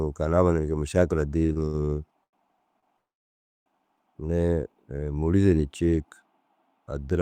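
A speech recording with two network timing faults. From 1.39 to 2.85 s there are repeated stalls (stutter): eight short holds, the longest 93 ms and together 311 ms, about 21% of that stretch. Each briefly stretches the last sound before the audio moves on, so it drags unevenly but loses nothing. Unlike the later fault, these pauses are brief and frequent rather than one long hold. From 2.97 to 3.68 s a single call audio freeze holds for about 0.69 s, nearly all of it silent after the last sound fades out. The audio then resumes exactly where it stopped, with nothing missing. This is likely a packet delay that drained the jitter buffer.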